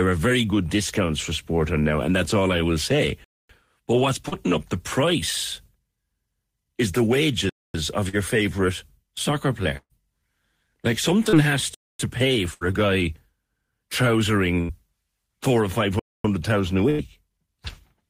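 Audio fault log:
3.24 s, 7.49 s, 11.74 s, 15.99 s: gap between chunks. The speech stops dead for 250 ms at each point, then picks up exactly where it left off. No audio is missing; the stream is being delivered in 4-second chunks and a quarter-second of silence is left between them. The holes therefore have hard edges and fall on a strict 4.25-second grid, giving a regular stop-start rhythm to the speech.
4.28 s, 8.09 s, 11.29 s: short concealed packet loss. About 40 ms of audio failed to arrive in time at each point, and the decoder bridged the hole for roughly 30 to 45 ms by extending the preceding sound, carrying its pitch forward where voiced and substituting shaped noise where not, before crossfading back into the real signal. Each one is heard as a brief smear or wobble, and a short consonant caught inside it can vanish.
9.77 s, 12.54 s, 14.61 s, 16.90 s: burst of packet loss. Consecutive packets were lost: about 120 ms at 9.77 s and about 80 ms at each of the others. 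The receiver extrapolated the last sound while fading it out, so a voiced sound becomes a held buzz and an unvoiced one a dying hiss. At 9.77 s the concealment runs out and about 40 ms of outright silence follows. The speech then resumes further on, with that stretch missing.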